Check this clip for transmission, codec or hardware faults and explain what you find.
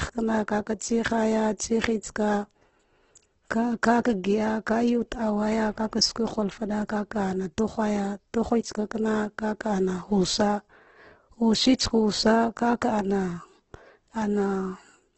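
One codec fault runs through the whole clip. The speech sounds rough, grainy and noisy from start to finish, and nothing reaches above 8.2 kHz. The likely cause is Opus compression in its CELT mode, at a rate that fits about 12 kbps. Short of bits, the encoder fills bands with noise or folded copies of lower bands, so tones turn noisy and grainy.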